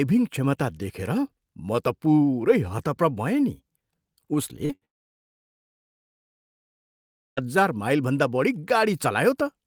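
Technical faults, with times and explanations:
4.65–4.71 s, short concealed packet loss: about 40 ms of the speech never arrived in time, so the decoder bridged the hole by extending the preceding sound and then crossfading back into real audio, leaving a brief smear or wobble where a small piece vanished.
4.75–4.83 s, burst of packet loss: roughly 60 ms went missing in a row, and the receiver stretched the last sound while lowering its level, giving a short held buzz or fading hiss before the speech resumes slightly further on.
4.85–7.39 s, long network dropout: about 2.5 s of speech is absent, heard as a short trailing continuation of the last sound and then near-silence until the audio returns, with everything in between lost, likely because nothing reached the receiver for that stretch.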